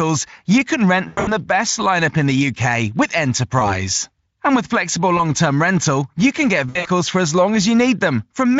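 The speech has VoIP packet loss concealed by the speech codec at 1.07 to 1.36 s (between "you can" and "best lineup in the"), 3.59 to 3.81 s, 5.17 to 5.21 s (after "with flexible", before "term rental you can") and 6.69 to 6.88 s (after "rental you can get", before "for as long"). The Speex decoder papers over the missing packets by stretching the last sound into a fading buzz. The first and last gaps are choppy, about 180 ms and 120 ms lost in scattered runs, which fits nine and six lost 20 ms frames. The middle two are single-frame blips. The voice stays smeared just after each one.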